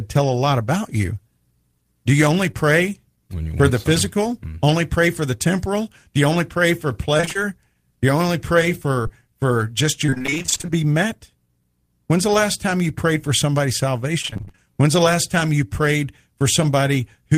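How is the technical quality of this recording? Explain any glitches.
The recording is marred by network packet loss at five points: two brief blips and three longer choppy stretches.

At 2.51 s, just after "you only", and again at 9.03 s, there is a quick smear lasting about 20 ms. This is short concealed packet loss: a fragment of the call arrived too late, and the receiver papered over the hole by extending the preceding sound before blending back in.

From 7.17 to 7.40 s (after "you only pray for"), 10.06 to 10.70 s, and 14.22 to 14.60 s (after "you prayed for somebody's"), the speech turns choppy, with pieces missing. This is repeated packet loss (robotic sound). Gaps of up to about 26 ms recur throughout each stretch, and nearly half of each span is synthesised continuation rather than real audio.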